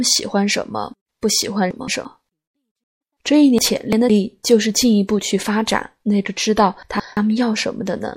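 The whole clip of speech sounds watery and swirly, with smeared s sounds. The likely cause is MP3 compression at a low bitrate, perhaps near 64 kbps. Weak frequency lines drop in and out between frames.

From 1.71 to 2.05 s there are chunks out of order. A 0.17 s chunk plays one chunk late. The order jumbles at hard joins.

At 2.84 s a stream reconnect begins. Sound stops for 164 ms. A new decoder restarts mid-stream at 3.00 s. The sound resumes roughly 0.2 s further on, so a short stretch is skipped.

From 3.58 to 4.10 s chunks are out of order again. A 0.17 s chunk arrives two chunks late. The garbled stretch is longer.

From 6.83 to 7.17 s one 0.17 s chunk plays one slot late.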